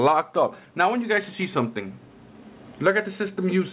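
No audible faults occur anywhere in this recording.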